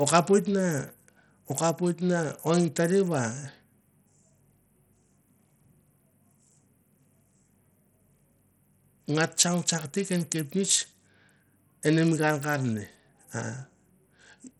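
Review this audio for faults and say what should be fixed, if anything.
Throughout the speech, the treble flickers and drops out, nothing is present above 17.9 kHz, and a gritty quantisation noise with aliasing rides on the sound. This is likely Bluetooth SBC compression with heavy damage, consistent with a starved bit pool near 64 kbps, where the upper sub-bands receive too few bits.

To prevent it, record through a wired connection or a higher-quality Bluetooth codec at a larger bit pool.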